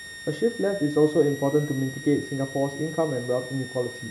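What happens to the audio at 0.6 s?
A high whistle near 2 kHz, drifting between about 1.83 and 1.91 kHz, sits well below the speech at 0.6 s and throughout the clip. This is switching supply whistle: a switching power supply running in an audible burst mode or beating with another one.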